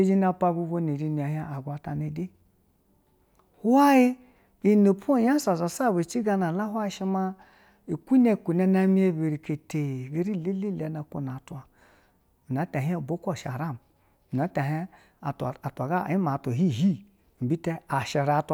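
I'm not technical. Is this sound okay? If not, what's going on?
Yes, nothing in this recording points to a technical fault, so the signal is in good working order.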